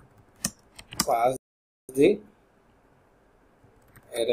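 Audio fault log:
1.37–1.89 s, playback stall: the sound halts mid-flow for 0.52 s, likely because the player ran out of data or its thread was blocked. The waveform drops to a near-flat gap and the spectrogram shows an empty vertical band until output recovers.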